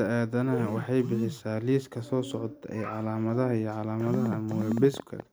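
From 4.01 to 5.21 s, likely interference injects a train of clicks: around fifteen uneven pops, 10.9 per second, about 10 dB above the speech.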